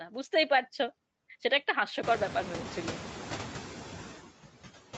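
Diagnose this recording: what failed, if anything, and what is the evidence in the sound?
Noise suppressor artifacts run throughout, from the call processing stage. Frame by frame, the suppressor pulls bands it judges to be steady noise down by about 10 dB. The background therefore sinks between phrases and swells back under speech, most clearly after the room noise rises around 2 s.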